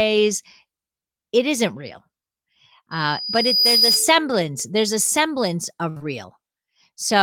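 From 2.91 to 4.11 s a loudspeaker feedback squeal takes hold: the microphone is picking up its own loudspeaker, and at 4.9 kHz the loop gain tops unity. A thin whistle swells over roughly the first 0.7 s until it sits a little louder than the speech, then cuts off.

At 3.77 to 3.84 s, under the squeal, a short concealed packet loss hides about 40 ms that never arrived. The decoder extends the preceding sound to cover it, leaving a brief smear.

At 5.90 to 5.98 s comes a burst of packet loss. About 60 ms of audio is gone, and the receiver stretches the last sound while fading it, so a held buzz or hiss dips before the speech resumes further on. A second short concealed packet loss follows immediately at 5.98 to 6.02 s, patching another 20 ms with a quick wobble.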